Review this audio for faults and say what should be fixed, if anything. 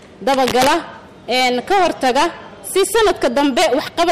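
Hard clipping runs the whole way through, and it's heavy. The signal's being pushed about 20 dB past what the converter or gain stage can pass, so a good chunk of the waveform, something like one sample in seven, gets sliced flat at the ceiling. Those squared-off tops throw harmonics way up the spectrum, which is why every loud moment comes out as harsh fuzz rather than just the odd crackle. To prevent it, set input gain so peaks sit well below full scale and leave headroom.

There's also cable scratch noise from 0.34 to 0.72 s: a short stretch of dense, ragged scratching laid over the sound, roughly as loud as the audio itself. That's most likely a worn cable, connector or pot being moved, with its contact resistance jumping around fast and spraying uneven noise bursts into the line. To prevent it, swap out or clean the suspect cable and connectors, and keep leads from being handled during takes.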